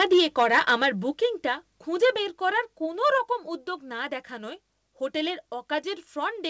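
The opening stretch, from 0.0 to 0.86 s, shows microphone overload: the input gain was likely set so high that peaks ran about 8 dB past the converter's ceiling, so the tops of the loudest waveforms are flattened, a few percent of samples in all. The loudest syllables carry a harsh, crackling edge. At 0.13 s the microphone volume steps down by about 2 dB, likely the call software reacting to that clipping, and level drops abruptly for both the speech and the background. A second, larger step of about 4 dB follows at 1.14 s. From 2.03 to 2.1 s, just before "বের করার", the peaks likely overran the input again by about 4 dB, this time flattening around a tenth of the samples, so the burst of crackle is short but dense. At 2.16 s, right before "বের করার", the gain drops once more by about 3 dB. Everything sits within a band that stops at 8 kHz, which fits a wideband call codec.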